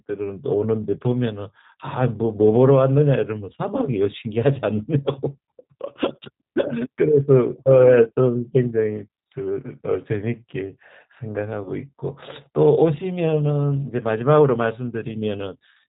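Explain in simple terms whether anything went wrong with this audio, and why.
The whole recording sounds slightly rough, thin and synthetic, with nothing above 4 kHz. That's the G.729 codec, a phone-call format that rebuilds speech from a simplified model.

From 11.64 to 11.71 s there's a brief stretched sound that fades away. That's VoIP packet loss concealed by the speech codec, which points to one lost packet. The decoder guessed the missing bit and took a moment to recover.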